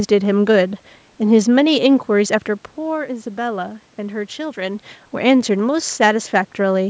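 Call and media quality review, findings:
Nothing stood out on listening to this speech clip; the room noise and the level changes near 2.5 s and 4.5 s, where the talker moves relative to the microphone, are part of the recording.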